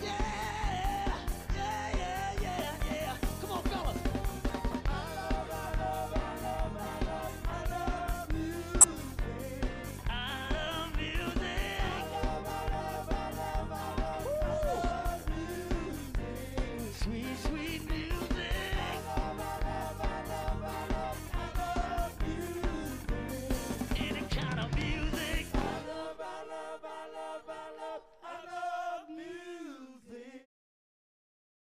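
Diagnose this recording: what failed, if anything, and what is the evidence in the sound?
The codec failed: a corrupt frame was decoded at 4.71–4.74 s and 8.81–8.84 s, each spanning about one frame, the second much louder. Flipped bits sent energy to wrong frequencies, a brief spurious burst rather than the smoothed gap of concealed packet loss.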